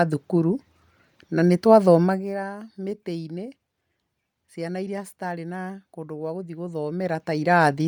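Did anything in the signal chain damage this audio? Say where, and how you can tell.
Yes. The damage is at the codec stage and runs through the whole speech clip: a grainy, breathy edge on the upper frequencies, where fine detail has been replaced by noise-like fill. This is typical of a transform codec starving its high bands at a modest data rate. The pattern most likely points to Bluetooth LC3 compression on 10 ms frames at around 48 kbps. The band stays open up to about 20.2 kHz, so the texture rather than a cutoff gives it away.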